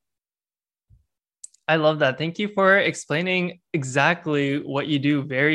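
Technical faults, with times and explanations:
No technical faults detected.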